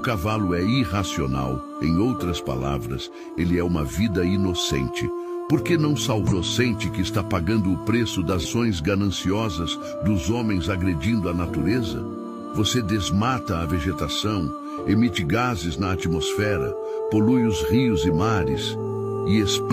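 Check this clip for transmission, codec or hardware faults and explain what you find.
Two short codec faults stand out, both damaged data in a compressed stream, at 6.27 to 6.33 s and 8.41 to 8.46 s. Corrupted bytes make the decoder misread frames and lose sync until it finds the next valid header. Each 54 ms break is a brief glitch, and a spectrogram shows it as a short disruption in the signal.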